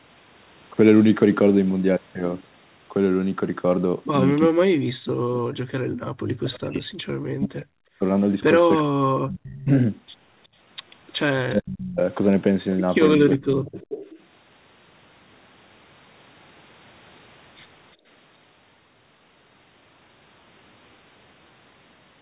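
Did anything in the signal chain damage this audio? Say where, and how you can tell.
Yes. The speech dips by up to about 40 dB at 4.49–5.71, 6.36–8.04, 8.81–9.7, 11.51–12.0 and 13.33–13.81 s. This is likely speech suppressed in double talk by the call's echo canceller. The level drops in pieces rather than the clean, sudden gaps of network packet loss.

Background gated by the echo canceller appears at 5.99–6.08 s, where the room sound falls by about 40 dB and then returns. This happens in the call processing stage.

An echo leak appears at 9.44–9.64 s and 13.34–14.23 s. A copy of the speech arrives 363 ms late, about 20 dB and then about 15 dB below the direct sound. This is likely residual loudspeaker pickup that the echo canceller failed to remove. A delay that long separates it from room reverberation.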